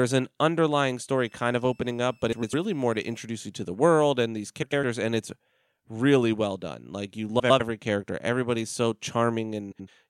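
A switching supply whistle runs from 1.19 to 3.19 s, starting just after "an underlying" and ending before "you to the world". It is a faint, thin tone between 2.57 and 2.67 kHz, roughly 40 dB below the speech. Its pitch wanders within that narrow band. That drift is the sign of a switching power supply dropping into an audible burst mode or beating against another converter as its load shifts.

Inside that whistle, at 2.32 to 2.54 s, the first frames out of order fault occurs. Two adjacent 104.5 ms blocks play in swapped order, which fits runs of four codec frames each. The same exchange recurs at 4.62 to 4.84 s (between "the world and these" and "and it's really well"), at 7.39 to 7.61 s, and at 9.72 to 9.88 s, where the blocks are 78.4 ms, consistent with three frames. Each stretch sounds like a brief garbled flutter, and no time is lost.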